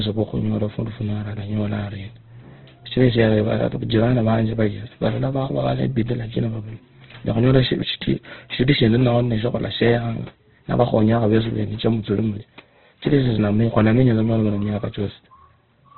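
From start to finish the speech carries heavy Opus compression damage, likely from an encoder in its CELT music mode starved at a rate that points to around 12 kbps. With too few bits, bands are filled by folding or noise, so the voice sounds grainy, rough and hissy rather than swirly, and narrowed to phone-like dullness. A spectrogram shows a hard ceiling near 4.1 kHz with nothing above, and speckled, noisy texture filling the harmonics below.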